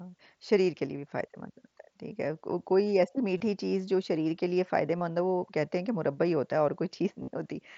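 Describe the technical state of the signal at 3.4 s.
At 3.37 to 3.40 s there is concealed Bluetooth headset packet loss, a gap of about 30 ms that fits a short run of lost frames. The receiver fills it by repeating the best-matching recent stretch of waveform, heard as a brief buzzy tone held at full level with a slight warble as real audio resumes.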